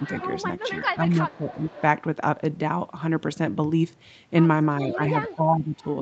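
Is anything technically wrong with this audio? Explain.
Yes. Two faults are audible, and both most likely come from a speakerphone echo canceller struggling while both sides talk at once.

Speech suppressed in double talk occurs at 0.00–0.04 s, 0.63–1.67 s and 4.81–5.83 s. The canceller likely could not tell the near talker from loudspeaker echo, so it pulled down everything. The voice sinks in level, by roughly 5 dB at the start, about 10 dB in the second stretch and about 15 dB in the last, where it sounds audibly ducked.

Echo leak appears at 0.00–0.28 s, 0.66–0.80 s, 1.31–1.82 s and 4.88–5.35 s. Residual loudspeaker pickup slipped past the canceller and was sent back, so a copy of the voice trails about 0.4 s behind the original. It sits roughly 15 to 20 dB below the direct speech, faint, and overlaps the suppressed passages. The missing content above 8 kHz is simply the call path's normal band limit.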